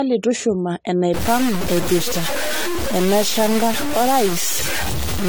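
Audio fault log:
throughout: generation loss. The speech sounds swirly, hollow and smeared, and consonant onsets blur more than a single lossy encode would explain. The likely cause is repeated lossy re-encoding: the character fits AAC-LC at around 64 kbit/s, decoded and encoded again a handful of times. Each pass quantises on a shifted frame grid, so its noise and spectral holes stack on the previous ones. Content above 20 kHz is gone.
1.14–5.29 s: low bit depth without dither. From 1.14 s to the end of the clip the speech turns harshly grainy. The distortion tracks the signal's level and shape rather than sitting as a steady hiss, and it is nearly as loud as the speech itself. Quiet passages sputter or fall to silence. This likely comes from truncation to very few levels, consistent with roughly 3 bits and no dither. Without dither, the rounding error stays locked to the waveform.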